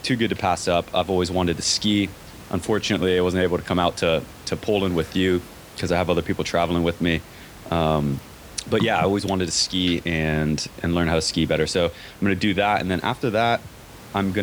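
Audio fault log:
No faults detected in this speech clip; the only background is room noise sitting about 21 dB below the speech.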